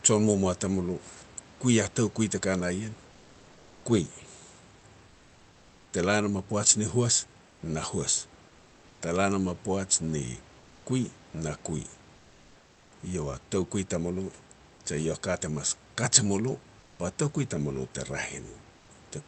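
Comfort noise in place of the background occurs at 5.07–5.87 s, just before "te la nam a", and again at 7.47–7.59 s, 12.15–12.91 s, 16.79–16.99 s and 18.79–18.87 s. In each pause the room noise becomes a steady, featureless hiss. It is about 2 dB quieter, and about 4 dB quieter at 16.8 s. This is likely due to Opus discontinuous transmission.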